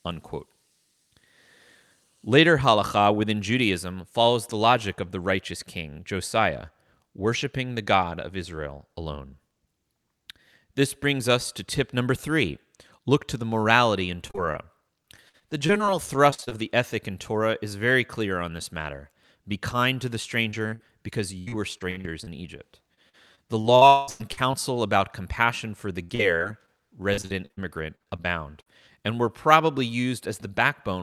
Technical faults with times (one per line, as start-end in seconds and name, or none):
14.27-16.53 repeated packet loss (robotic sound)
20.51-24.55 repeated packet loss (robotic sound)
23.87-24.09 long network dropout
26.03-28.68 repeated packet loss (robotic sound)